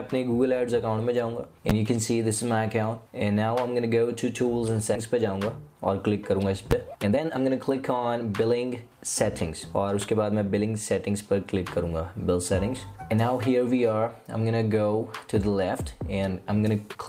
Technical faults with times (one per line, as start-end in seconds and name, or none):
1.70 invalid numbers at full scale
4.95 skip ahead
5.13-6.47 jitter buffer speed-up
6.71 invalid numbers at full scale
6.90-8.95 jitter buffer speed-up
9.49-10.66 jitter buffer speed-up